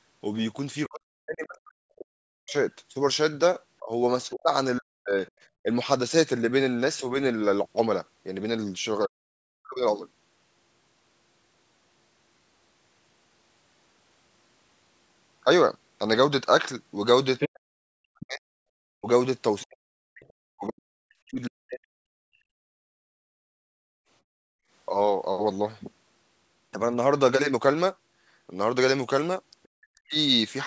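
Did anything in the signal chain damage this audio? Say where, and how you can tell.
Yes, the call processing stage, where the echo canceller acted on the microphone signal. Speech suppressed in double talk, likely from the canceller mistaking overlap for echo: between 0.87 and 9.82 s, 17.52 and 22.03 s, and 29.71 and 30.16 s, the speech envelope shows dips of roughly 40 dB.

The other side's voice leaking through, likely residual echo, appears as extra spectral traces at 2.49 to 5.31 s (about 30 dB down), 17.39 to 20.33 s (about 5 dB down), and 29.63 to 29.68 s.

Background gated by the echo canceller between 22.31 and 24.7 s: the noise floor drops by about 36 dB, roughly 2 s in total, leaving near-empty bands in the spectrogram below the 8 kHz ceiling.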